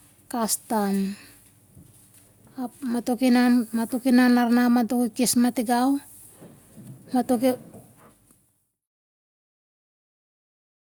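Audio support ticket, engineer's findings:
No audio faults found.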